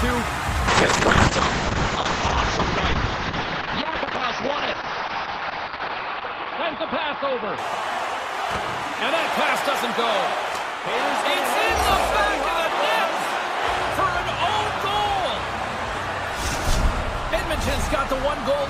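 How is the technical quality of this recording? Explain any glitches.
The recording has one clear glitch, a call bitrate drop, from 0.73 s to 8.90 s. The bandwidth shrinks from 20 kHz to 6 kHz and the sound turns muffled, rough and watery, bottoming out for about 5.3 s. This fits the encoder being forced from 64 kbps down to roughly 7 kbps. A simple low-pass filter would only dull the top end, but here the coarse coding also adds watery grain, and both the clarity and the full bandwidth return once the rate recovers.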